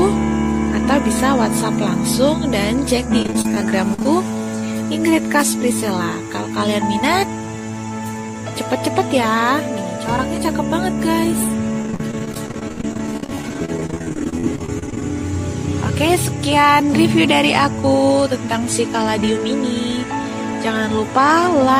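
From 3.22 to 4.06 s there is repeated packet loss, heard as robotic sound. Short holes arrive in quick succession, none longer than about 39 ms. Each is patched by stretching the last bit of sound, so the audio turns choppy and robotic. About a quarter of that stretch is filler. The same fault returns, longer, from 11.82 to 15.10 s. Here the holes run up to 56 ms. Roughly 30 percent of the span is concealed.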